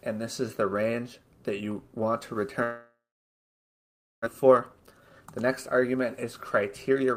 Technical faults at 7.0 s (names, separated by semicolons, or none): jitter buffer speed-up